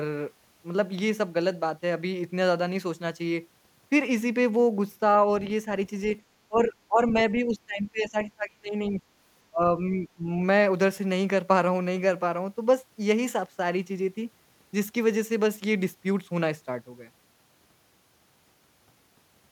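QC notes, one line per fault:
6.48–7.15 s, speech suppressed in double talk: the echo canceller likely mistook the overlap for echo and pulled the speech down about 20 dB, for under half a second in all.
7.34–9.01 s, speech suppressed in double talk: likely the same canceller confusion, now deeper at about 30 dB, for roughly a second and a half.
9.5–9.61 s, speech suppressed in double talk: a brief, likely canceller-driven cut of about 30 dB, around a tenth of a second.
9.77–10.28 s, speech suppressed in double talk: a milder, likely canceller-caused dip of about 15 dB, a few hundred milliseconds long.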